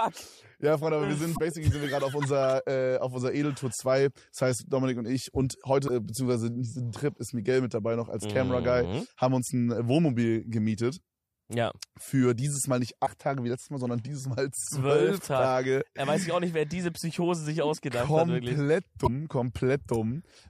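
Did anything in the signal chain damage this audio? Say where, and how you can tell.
Yes: damaged data in a compressed stream at 1.32–1.39, 5.84–5.89, 13.02–13.08 and 19.03–19.09 s, brief codec blips where corrupted frames broke decoder sync.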